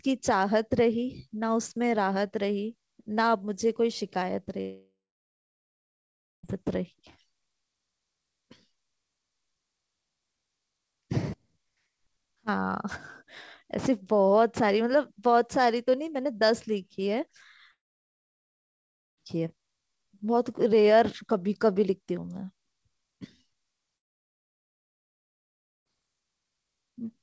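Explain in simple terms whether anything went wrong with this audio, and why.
Yes, the speech cuts out three times, at 4.61 to 6.46 s, 17.71 to 19.20 s, and 23.97 to 25.88 s. Each gap lasts roughly one and a half to two seconds. You get a short fading buzz at most, then plain silence, and the talking resumes with that stretch simply gone. That's a long network dropout: most likely the audio stopped arriving over the call's G.722 link, which also keeps everything below 8 kHz.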